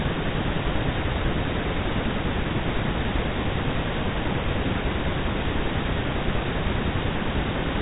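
Nothing here counts as a fault: the speech simply comes over an ordinary G.711 telephone line, so everything above about 3.8 kHz is absent, as expected for that format.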